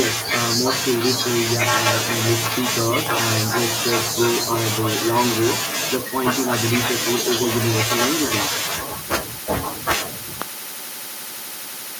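A sudden voltage pulse, likely from a switch, plug or static discharge, hits the signal at 10.42 s, producing a single sharp loud pop that stands well above the speech, which carries on underneath.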